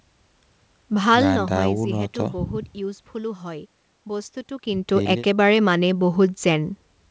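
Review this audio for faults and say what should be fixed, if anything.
Nothing here needs fixing: the speech sits within the expected band of a G.722 call path at 64 kbps, with nothing above 8 kHz and the lowest bass trimmed by the call's microphone processing, and its smooth level rides are part of normal handling rather than a defect.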